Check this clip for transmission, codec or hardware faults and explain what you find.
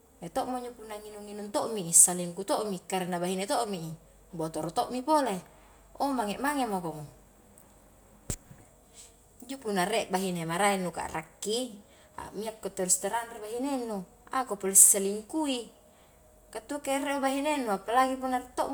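Nothing stood out on listening to this speech recording.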